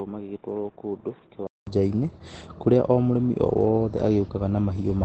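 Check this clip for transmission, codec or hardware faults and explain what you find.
There is one codec fault, present for the whole clip: Opus voice compression. The SILK coder, at a rate that fits about 12 kbps, cuts everything above 8.5 kHz and codes the excitation coarsely, leaving the speech muffled, hoarse and slightly robotic.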